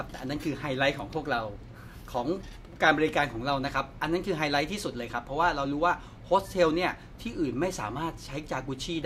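Speech recording with no technical faults audible anywhere in it.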